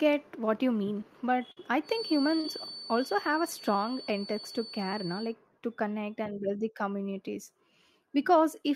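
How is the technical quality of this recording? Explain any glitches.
The recording has three glitches: two brief dropouts from lost network packets and a steady whistle through the middle of the speech.

Burst of packet loss, 1.51 to 1.57 s: about 50 ms of audio never arrived, so the receiver stretched the last sound and faded it, leaving a short fill before the speech jumps ahead.

Feedback whistle, 1.81 to 5.36 s: a thin 4.5 kHz tone that slowly swells and fades sits roughly 15 dB under the speech, likely from a loudspeaker-to-microphone loop hovering just below runaway feedback.

Short concealed packet loss, 2.40 to 2.45 s: around 30 ms went missing, and the receiver patched the hole by continuing the preceding sound, heard as a quick smear before the real audio returns.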